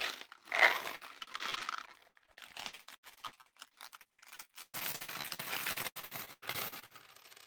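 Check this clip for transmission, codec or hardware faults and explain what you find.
One transmission fault is present. Repeated packet loss (robotic sound) from 0.95 to 6.92 s: dozens of gaps up to 116 ms are patched by extending prior audio, about a third of the stretch, giving choppy sound with pieces missing.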